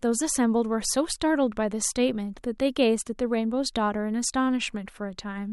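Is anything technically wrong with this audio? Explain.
No, nothing is technically wrong with this audio.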